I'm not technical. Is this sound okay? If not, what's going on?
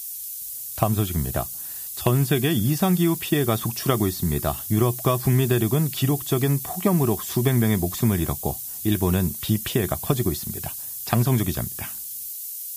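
No. From the first second to the last, a steady, thin hiss sits almost as loud as the voice and gets sharper toward the high end. That's low bit depth with noise shaping: the speech is stored very coarsely, likely with only about 5 bits, and the rounding error is pushed up into the treble.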